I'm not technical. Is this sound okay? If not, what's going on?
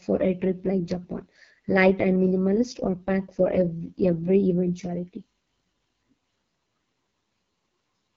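No. The speech went through an AMR wideband (HD Voice) codec, the phone-call compression, at one of its lowest settings, which squeezes the voice hard. From start to finish it sounds rough and raspy, with nothing above 7.2 kHz.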